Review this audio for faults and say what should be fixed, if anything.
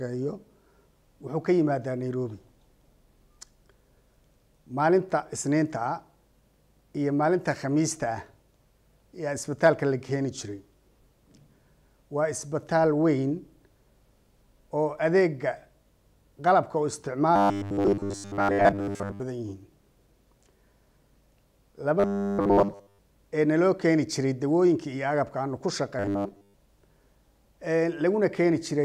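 Robotic sound from repeated short buffers occurs at 17.36–19.20 s, 22.00–22.99 s and 25.99–26.54 s, where the sound turns into a rigid, metallic 100 Hz buzz. The likely cause is a short segment of about 10 ms being replayed while new audio fails to arrive. The repeats replace most of the first and last stretches and essentially all of the middle one. To prevent it, enlarge the playback buffer or remove the upstream stall so fresh audio arrives on time.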